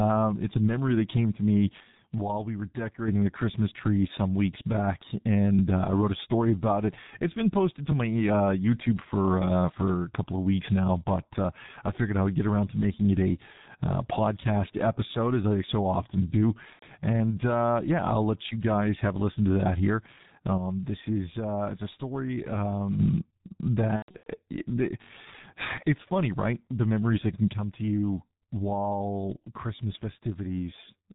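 Throughout the clip the speech is muffled and hoarse, with nothing audible above 4 kHz and consonants smeared together. This is the G.723.1 codec running at about 6.3 kbit/s, and the damage is heavy. The codec works in 30 ms frames and rebuilds the voice from a coarse model that changes only slowly, so fast articulation and the airy top end of the sound never make it through.

At 7.92 s a short fragment of about 21 ms plays twice in a row, with a hard seam at the join, heard as a brief click-like stutter. This is a repeated buffer: fresh audio did not reach the output in time, so the device replayed its last chunk. The length fits a 1024-sample buffer.

From 16.73 to 16.86 s the speech turns into a buzzy, stretched tone that fades. This is VoIP packet loss concealed by the speech codec. About 90 ms of packets went missing, and the decoder filled the gap by extending its last pitch and spectral shape while lowering the level. 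A longer episode runs from 23.96 to 24.31 s, where 240 ms were lost across a 300 ms stretch. The longest unbroken gap is 120 ms, so the sound mutes within that run, and the voice stays weak and distorted for a while after packets return.

At 25.02 to 25.11 s the repeated buffer returns more severely. The same 21 ms piece plays five times in total, giving a rapid buzz with hard joins instead of a single stutter.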